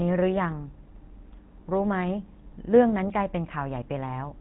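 Throughout the speech, the GSM full-rate codec models the vocal tract and drives it with a sparse, regularly spaced pulse excitation, consistent with a 13 kbps stream. The result is a plainly audible buzzy, gravelly roughness, with nothing passing above 3.9 kHz.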